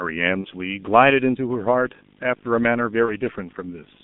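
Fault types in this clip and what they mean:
G.723.1 codec: This early low-rate telephony codec is active for the whole clip. The speech is confined to roughly 150 Hz to 3.6 kHz, sounding muffled, hoarse and grainy, with smeared consonants. The heavy damage fits a bitrate near 6.3 kbit/s with 30 ms frames. Plain band-limiting would keep the speech clean inside a narrow band. Here the texture itself is rough, because the coarse voice model cannot track fast changes.
VoIP packet loss concealed by the speech codec: Two brief glitches occur, at 0.41 to 0.48 s and 3.05 to 3.13 s, each consistent with one lost 30 ms frame. The decoder fills each gap by extending its last pitch and filter at falling gain, so the speech turns into a short buzzy or noisy smear and stays weakened as it recovers. A dropout would leave silence, and a click would be instantaneous.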